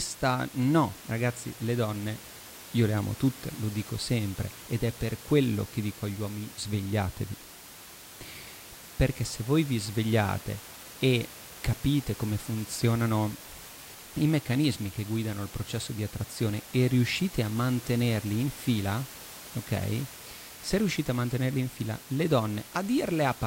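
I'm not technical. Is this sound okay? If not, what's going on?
Yes, nothing has gone wrong with this recording of speech. There is some quiet background noise from the room the microphone was in, sitting well below the speech, and that is simply part of where it was recorded.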